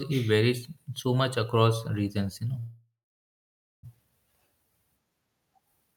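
After "across regions you know", a call audio freeze from 2.59 to 3.85 s stretches the last sound into a fading buzz, then silence, likely from delayed packets. Unlike a dropout, the speech resumes intact.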